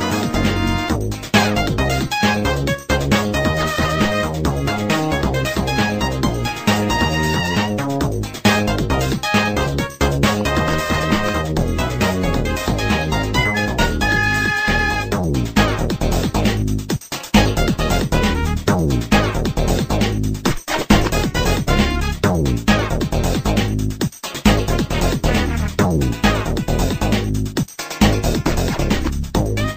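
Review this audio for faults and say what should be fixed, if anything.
A train of clicks runs from 10.41 to 11.22 s: around seven similar pulses at about 6.2 per second, irregularly spaced, peaking roughly 5 dB above the sound. Unlike random crackle, the clicks share one shape, likely interference or a faulty connection or power supply. Shield cabling and keep the interface away from noisy equipment.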